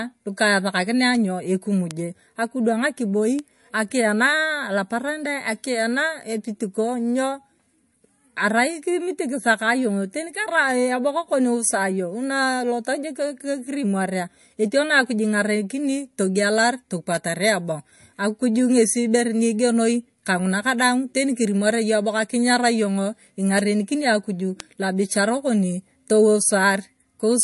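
Throughout the speech, nothing is heard above 11.3 kHz, and the sound has a watery, swirly quality. Sibilants carry a metallic chirp, and consonant attacks smear. The likely cause is MP3 compression at a low rate, which fits a bitrate of about 48 kbps. The encoder cut the treble at a fixed point. Short of bits, it also dropped weak frequency lines, which flicker on and off between frames. The damage is plainly audible.

Four bit error spikes occur, at 1.15, 1.91, 3.39 and 24.60 s. Each is a single sharp tick, broadband and unrelated to the speech around it. In each case a flipped bit made a sample value jump by a power of two and then return. The first three affect one sample each. The last spans three consecutive samples. All four are too brief to hear as anything but a click.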